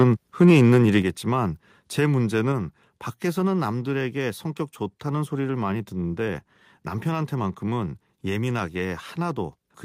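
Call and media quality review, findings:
Microphone overload, 0.41 to 0.98 s. Harsh crackle on loudest syllables, peaks flattened at the converter's limit. Input volume likely set too high, driving the converter about 2 dB past its limit. A small fraction of samples clipped.

Microphone volume stepped down at 1.02 s. Voice and background drop together by about 6 dB in one step, right after the distorted stretch. Call software likely reacted to the clipping and lowered device input gain.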